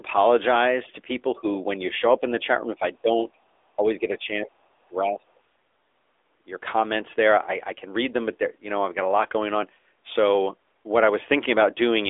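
Throughout, the speech carries the AMR narrowband mobile codec's buzzy, synthetic edge, which fits a bitrate near 10.2 kbps. Nothing passes above 3.7 kHz, unlike a plain low-pass, which would leave no buzz. At 1.35–1.45, 2.44–2.83, 3.02–3.09 and 3.76–5.41 s, the level dips by roughly 10 to 35 dB, deepest in the last dip. This is likely speech suppressed in double talk: gain ducking, not packet-loss gaps.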